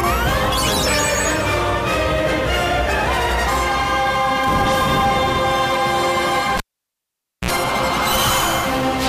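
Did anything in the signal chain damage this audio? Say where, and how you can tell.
Yes. A cable was pulled and plugged back in between 6.57 s and 7.51 s, a fault in the analogue wiring. A pop marks the break, then the signal drops to near silence for about 0.88 s while the connection is open. As the plug goes back in, only the tip touches at first, so an ungrounded conductor picks up roughly 61 ms of 60 Hz mains buzz. A second pop follows when the sound returns.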